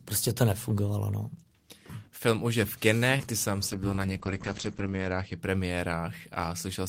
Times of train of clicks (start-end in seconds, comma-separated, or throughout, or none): none